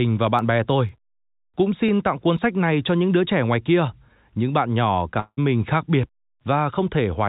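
Speech carried over a call path whose G.711 A-law coding leaves nothing above 4 kHz, so it sounds narrowband. From 0.39 s to 2.89 s there are periodic USB or driver dropouts. A tick lands every 0.5 s, roughly seven times in all. Each one is a tiny skip, well under a millisecond of audio simply missing. The even spacing points to a background task stalling the audio driver or USB bus on a fixed schedule. The ticks only show while speech is present. At 5.20 s the sound breaks up, and it recovers at 5.39 s. The last sound is drawn out as a fading buzz for about 170 ms, and a brief silence follows. Speech then resumes with roughly 180 ms gone. This is likely a long network dropout, with the receiver concealing the gap before giving up.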